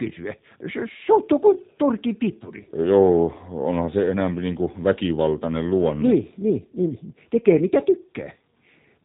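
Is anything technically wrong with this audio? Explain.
Yes. Throughout, the speech passed through a G.729 codec: it is rebuilt from a vocal tract model and sparse pulses, leaving it rough and synthetic, with nothing above 3.8 kHz, which fits 8 kbit/s.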